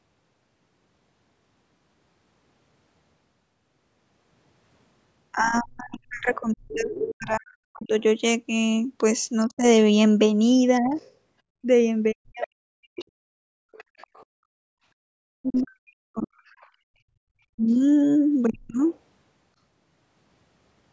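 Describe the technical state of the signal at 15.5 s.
At 15.5 s two things overlap. There's the other side's voice leaking through, running from 10.97 to 16.69 s. It's a faint second voice sitting well under the main one, something like 30 dB down. That's most likely the far end playing on the talker's loudspeaker and getting back into the mic because the echo canceller didn't fully strip it out.

Right on top of that, from 15.41 to 18.82 s, you get speech suppressed in double talk. The main voice drops out in chunks, very deep at worst (on the order of 40 dB), adding up to roughly a second and a half across that window. The likely story is that both sides were talking at once, and the canceller couldn't tell its own talker from the echo, so it ducked everything.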